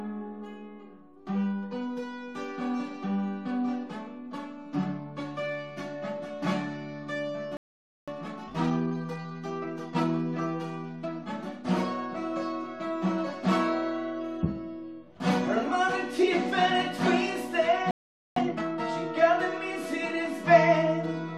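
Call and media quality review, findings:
Playback stall, 7.57 to 8.08 s and 17.91 to 18.36 s. Sound cuts out mid-flow for about 0.51 s, then 0.45 s. Likely player buffer underrun or blocked output thread.

Time-compressed catch-up, 8.08 to 10.10 s at 1.25x, and 18.36 to 18.80 s at 2x. Audio hurried at normal pitch. Player trimming backlog by cutting and cross-fading short segments after each stall.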